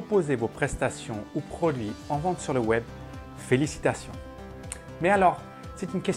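At 0.52 to 0.56 s, and again at 3.42 to 3.46 s, brief loose connector crackle breaks in. A worn or dirty contact is making and breaking. The signal gets chopped into fragments. Each burst sounds like a short, irregular scratch of crackle.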